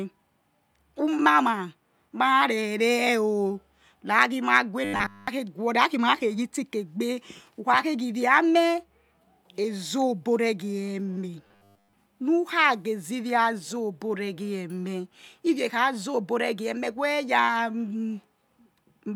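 Speech with robotic sound from repeated short buffers at 4.85–5.28 s and 11.47–11.93 s. A rigid 100 Hz metallic buzz replaces the voice, likely from 10 ms blocks being repeated while fresh audio is skipped, fully in the first stretch and mostly in the second.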